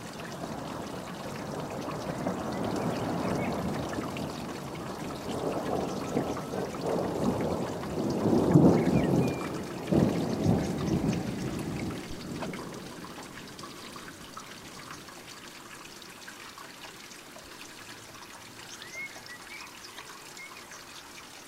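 Nothing here stands out as a technical fault; the sound just runs along without any audible trouble.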